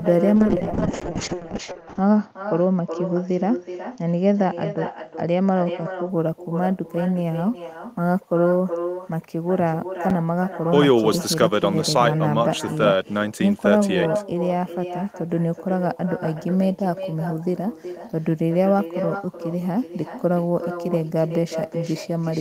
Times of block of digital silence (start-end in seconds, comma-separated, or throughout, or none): 1.00, 10.10